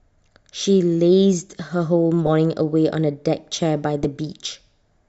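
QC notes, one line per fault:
2.26 s, corrupt frame decoded: a single damaged frame played anyway; misread gains throw energy to wrong frequencies, giving a short glitch peaking around -10 dBFS.
4.03–4.06 s, corrupt frame decoded: a couple of consecutive bad frames decoded as-is, misplacing spectral energy into a brief glitch, again reaching around -10 dBFS.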